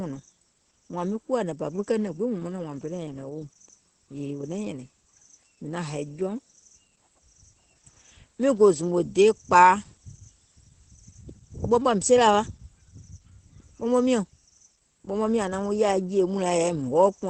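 From start to finish, the speech carries Opus voice compression damage that is plainly audible. Nothing is present above about 8.3 kHz, the wideband ceiling of the SILK linear-prediction coder, so the top end sounds dull and muffled. The excitation is coded coarsely, giving the voice a hoarse, faintly robotic grain. That combination of band limit and rough texture points to a low bitrate, around 12 kbps.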